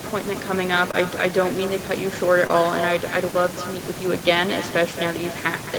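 Speech runs throughout with an echo with no canceller. Each phrase is trailed about a fifth of a second later by a thinner copy about 12 dB down. That is the far end's loudspeaker feeding its microphone back across the network. A distinct delayed repeat like this points to echo rather than room reverberation, which would smear into a continuous decaying tail. Two short concealed packet losses occur, at 0.91 to 0.95 s and 2.47 to 2.51 s. Each time, about 20 ms of audio failed to arrive, and the decoder extended the preceding sound and blended back, leaving a brief smear or wobble. Unlike a hard dropout, the gap is filled rather than silent, and unlike clipping, there is no harsh distortion.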